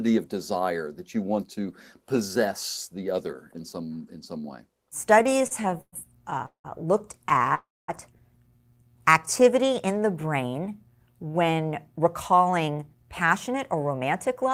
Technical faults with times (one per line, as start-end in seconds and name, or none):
5.19-5.94 repeated stalls (stutter)
6.30-6.66 repeated stalls (stutter)
7.26-7.53 repeated stalls (stutter)
7.55-7.90 call audio freeze
11.26-14.52 jitter buffer speed-up